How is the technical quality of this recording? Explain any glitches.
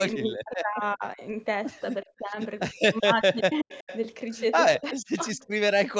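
The speech is repeatedly dipped and cut, with faint repeats of the voice in two places.

From 0.0 to 1.21 s, 2.03 to 2.38 s, 2.98 to 3.89 s and 4.73 to 5.35 s, the voice drops sharply, by as much as about 40 dB, in broken pieces. This is likely speech suppressed in double talk: the echo canceller couldn't separate this talker from the other side's loudspeaker sound and turned both down.

At 3.72 to 3.98 s and 5.37 to 5.46 s, a faint copy of the voice trails it by 375 ms, at roughly 20 and 35 dB below the speech. This is likely an echo leak, where a loudspeaker's sound got past that side's echo canceller and returned.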